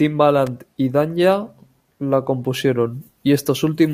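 At 0.47 s a sharp snap cuts across the speech. This is an electrical switching spike, lasting about 6 ms and peaking around -15 dBFS. A nearby switch or motor likely arced, and the audio line picked up the burst.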